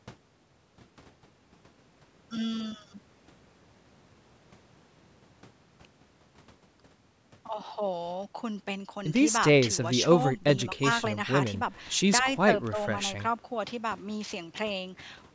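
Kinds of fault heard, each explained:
Nothing here counts as a fault: the speech has simply been through a call's microphone processing, which is why nothing reaches above 8 kHz, and that's just how such a path sounds.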